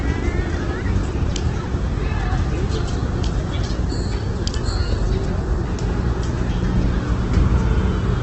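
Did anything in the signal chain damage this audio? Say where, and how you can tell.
Yes, and it's in the codec stage, running the whole way through. Nothing comes through above about 8.4 kHz, and what's left has a heavy rough, grainy texture, with tonal parts turning noisy rather than swirly or hollow. That's the signature of likely Opus compression in its CELT music mode at a very low rate, around 12 kbps: band energies survive, but starved bands get filled with folded or noise content, and the bandwidth narrows to wideband.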